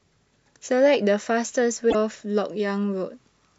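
At 1.87 s, lasting about 80 ms to 1.95 s, the speech is broken by damaged data in a compressed stream. The decoder misreads corrupted frames and loses sync, producing a brief chirp, squawk, click or short hole. The waveform shows an abrupt discontinuity.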